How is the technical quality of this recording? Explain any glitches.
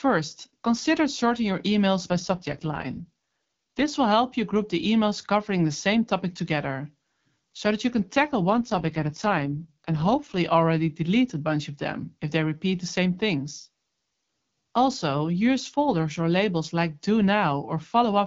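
The recording is wideband phone-call speech, likely carried by the AMR-WB (HD Voice) codec, with two brief stretches of degraded quality.

AMR rate drop, from 2.1 to 3.89 s and from 8.49 to 10.38 s: the speech turns rougher, buzzier and more synthetic, then clears again. The sound points to the codec stepping down from about 12.65 to 6.6 kbit/s, giving up detail to protect the signal on a weak link. The audio band never narrows and nothing drops out, which tells this apart from a switch to narrowband or from packet loss.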